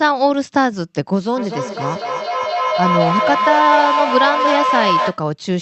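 From 1.37 s to 5.24 s a feedback howl builds up. Two devices on the same call share a room, so the sound loops from loudspeaker to microphone and returns a little louder each time. The repeats pulse about every fifth of a second, narrow to a tone near 1 kHz, and grow until they reach about the level of the speech. With plain echo the repeats would fade. Here they swell. A steady hum or test tone would not pulse.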